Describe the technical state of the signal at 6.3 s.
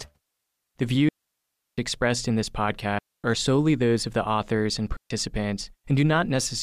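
At 6.3 s the speech signal is intact, with no dropout, clipping, distortion or other fault audible at that point.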